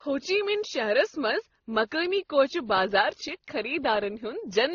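Throughout the speech, smeared, watery artefacts from several codecs sit on top of one another, the signature of transcoding between lossy codecs, likely AAC then WMA then Opus. A spectrogram shows blotchy, patchy high bands under a hard ceiling near 19.1 kHz.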